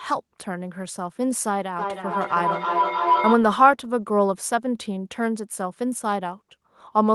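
Feedback howl runs from 1.79 to 3.47 s. Sound from a loudspeaker re-enters the microphone and gains level on each trip around the loop. It narrows to a tone near 1 kHz, with the loop repeating roughly every third of a second, and swells to about the level of the speech.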